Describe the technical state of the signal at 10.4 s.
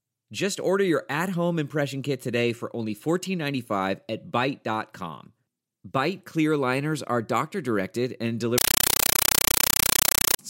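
A Dolby Digital (AC-3) compressed stream played as audio, not decoded, from 8.58 to 10.39 s replaces the speech with loud chattering static, 8 ms noise bursts 31 times a second.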